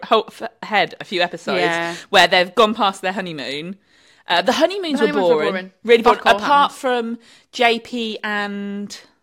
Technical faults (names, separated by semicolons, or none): none